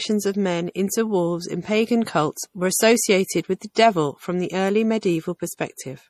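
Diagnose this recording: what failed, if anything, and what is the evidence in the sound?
Codec stage: the speech carries the smeared, swirly artefacts of heavy compression through the whole clip, and nothing is present above 14.7 kHz. This is likely low-bitrate audio saved at a high bitrate: the damage fits a roughly 40 kbit/s MP3 pass, and the later 192 kbit/s re-encode preserved it without restoring anything.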